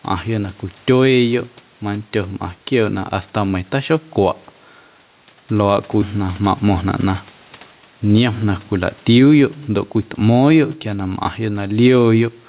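Throughout the speech, the gain swings by about 10 dB, squashing loud and soft parts closer in level. This is gain pumping, likely from gain set too high with a fast limiter pulling it down.

From 6.63 to 7.39 s the speech briefly sounds hurried at unchanged pitch, running about 7% fast. This is a jitter buffer speed-up, where the receiver trimmed around 50 ms of pitch-period slices to shrink its excess delay. The call path's narrowband sound, with nothing above 4 kHz, remains audible throughout.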